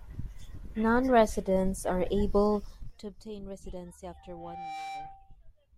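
Zipper noise runs from 2.66 to 3.12 s, just after "are able". The speech level drops by about 20 dB, but in coarse 2 dB steps instead of a continuous ramp. There are around thirty of them each second, and every jump leaves a small click in the waveform. Together the clicks form a fast ticking, a zipping texture laid over the speech for as long as the level is falling.

Loudspeaker feedback squeal runs from 4.10 to 5.36 s. A microphone is picking up the loudspeaker it drives, and at 783 Hz the loop gain has climbed past unity. So that frequency feeds on itself. It rises as a pure tone over a bit under a second, then settles into a steady squeal about 5 dB louder than the speech, holding there until it stops at 5.36 s.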